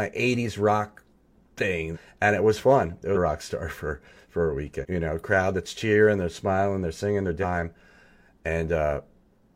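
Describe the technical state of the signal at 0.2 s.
At 0.2 s the speech signal is intact, with no audible fault at that moment.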